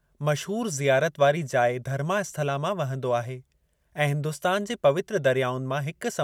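There are no technical faults in this speech recording to describe, so there is nothing to place in time order.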